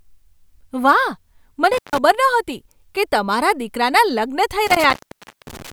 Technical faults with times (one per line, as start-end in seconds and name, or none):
1.73-1.98 intermittent contact
4.67-5.73 intermittent contact